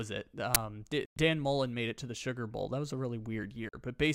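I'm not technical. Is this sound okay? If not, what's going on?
No, there are three problems in this speech recording.

At 0.55 s there is a sharp burst of harsh digital noise. It lasts only about 12 milliseconds, so it sounds like a loud click or crackle. This is an uninitialised buffer. The playback system grabbed a chunk of memory and played it before any real audio had been put there. So it played leftover junk data as sound. The length fits a 512-sample buffer.

Twice, the sound simply vanishes and then comes back. The first gap runs from 1.05 to 1.17 s, about a tenth of a second. The second, shorter gap runs from 3.69 to 3.74 s, about 43 milliseconds. After each gap the speech carries on as if it had kept playing. That pattern is likely a Bluetooth dropout. The wireless link failed to deliver chunks of audio in time, so they were thrown away and silence played instead.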